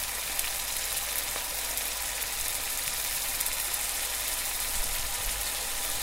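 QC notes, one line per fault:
No technical faults can be heard anywhere in this recording.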